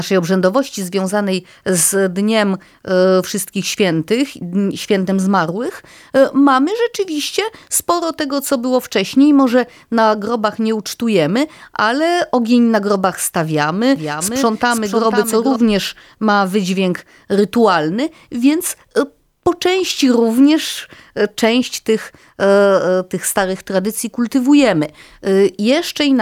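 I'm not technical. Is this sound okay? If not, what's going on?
No. From 13.96 to 15.56 s, just after "ogień na grobach stawiamy", there is a doubled audio track. The likely cause is the same speech being picked up twice, once through a slower route, so both copies end up mixed together. You hear the speech plus a quieter repeat trailing about half a second behind, like a clean echo with no room sound, which switches on and off abruptly.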